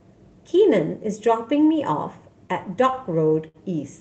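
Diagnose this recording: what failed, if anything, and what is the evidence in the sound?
The failure is at the network and jitter-buffer stage of the Opus call path, and it shows up as short stalls from late packets in this speech at 2.91 to 2.96 s and 3.48 to 3.57 s. The receiver held the last sound for 19 ms, then 64 ms, until each packet arrived, so the speech drags with a faint buzz or dip. Unlike lost-packet concealment, nothing is skipped: playback resumes where it paused, 19 then 64 ms later, with the top end capped near 8 kHz throughout.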